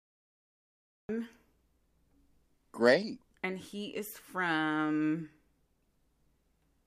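From 0 to 1.09 s there is nothing but digital silence, and then the speech breaks in abruptly mid-sound: a cut-off start. Capture began late, so the onset of that sound was never recorded and the audio jumps straight from silence into the sound with no attack or fade. On a waveform, a flat silent line ends in a vertical wall at 1.09 s. A spectrogram shows blank space before a hard vertical edge.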